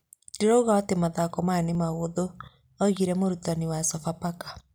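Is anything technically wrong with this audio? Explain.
Yes. At 0.85, 1.75 and 3.98 s the speech jumps, likely a dropped buffer (overrun): the capture wasn't read before the hardware overwrote it, so a few milliseconds, around 5 to 10 ms, vanish and the surrounding audio butts together.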